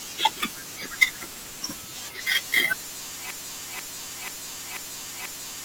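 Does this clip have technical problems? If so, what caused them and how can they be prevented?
Yes. A stalled player or stream likely kept resending its last fragment, a broken-record loop: from 3.31 s to the end, a 0.49 s piece repeats five times. Outputting silence during stalls instead of replaying held data, with a watchdog to restart the stream, would prevent it.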